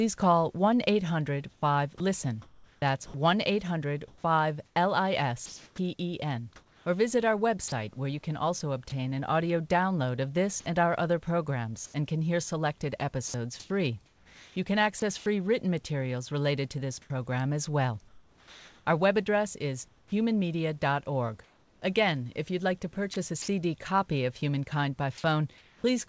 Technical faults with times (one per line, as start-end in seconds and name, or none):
1.52-7.72 sound chopped by the voice detector
10.60-10.66 sound dropped by the voice detector
10.60-11.94 comfort noise in place of the background
13.28-15.26 sound chopped by the voice detector
17.02-20.12 sound chopped by the voice detector
21.44-23.48 sound chopped by the voice detector
25.18-25.24 sound dropped by the voice detector
25.18-25.84 comfort noise in place of the background